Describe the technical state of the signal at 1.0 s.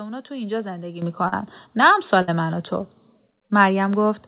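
At 1.02 s the microphone volume steps up: the call software judged the input too quiet and raised the device's input volume in a single jump of about 9 dB. Speech and background noise rise together at that instant and stay louder, which separates it from a gain ramp or compressor pumping, where the level glides or recovers. The call path's telephone-band sound, with nothing above 4 kHz, is the same on both sides of the step.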